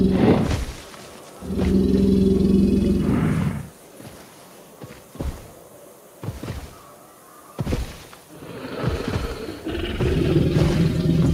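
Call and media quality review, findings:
No faults found in this recording. Nothing to log against any component.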